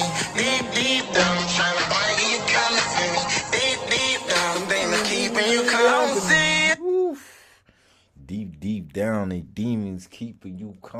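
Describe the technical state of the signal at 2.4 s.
At 2.4 s the clip is inside a call bitrate drop lasting from 1.01 to 7.14 s: the encoder's budget fell from 64 to 9 kbps, bottoming out for 1.31 s, and bandwidth narrowed from 20 kHz to 8 kHz, leaving the audio muffled, coarse and watery.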